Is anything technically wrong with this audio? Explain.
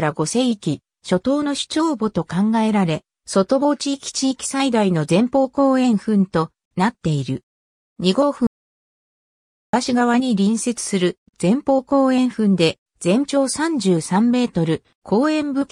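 Yes. There is an audio dropout to silence from 8.47 s to 9.73 s. The input feeding the recorder was most likely lost for that stretch, through a disconnected device, a failed link or a mute, while recording carried on writing silence. The sound cuts off abruptly mid-flow and returns just as suddenly, leaving about 1.26 s of complete silence with no room tone underneath, and whatever occurred during that gap is gone.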